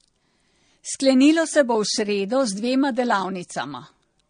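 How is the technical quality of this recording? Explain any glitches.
The quality is limited by one problem that runs through the whole clip. The speech shows transcoding between lossy codecs, likely a low-rate AAC encode later re-encoded to MP3. Nothing is present above 9.7 kHz, so the top end sounds dull. Each encoder added its own smearing and swirl, and the second spent bits on the first one's damage. The two kinds of artefact sit together. The sound fits low bitrates at both stages.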